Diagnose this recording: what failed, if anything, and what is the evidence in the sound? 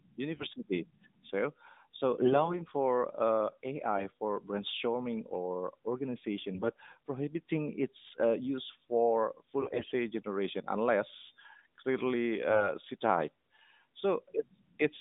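AMR bit errors on the radio link: speech turns hoarse and gargly at 0.36–0.47, 2.20–2.61, 3.95–4.07, 6.54–6.78, 9.60–9.92 and 12.48–12.69 s. The level holds, but the spectrogram smears into noisy, scrambled formants below 4 kHz.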